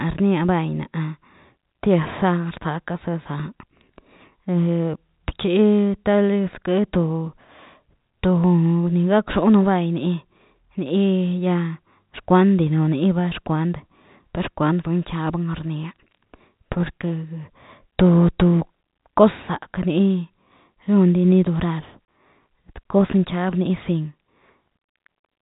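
At 22.05 s the speech drops out for 30 ms, ending at 22.08 s: packet loss filled with silence, where the receiver, missing what sounds like a single packet over the 4 kHz-limited G.711 telephone line, played nothing. The waveform shows a flat gap with abrupt edges, and the spectrogram a blank vertical strip.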